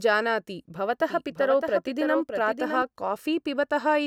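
From 1.00 to 2.82 s the speech has a doubled audio track: a second full-band copy trails roughly 0.7 s behind, a few dB quieter, likely from a slower capture path. Unlike an echo, it has no decay or room colour and starts and stops abruptly.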